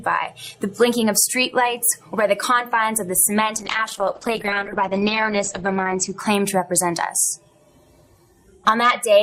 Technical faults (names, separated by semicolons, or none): call bitrate drop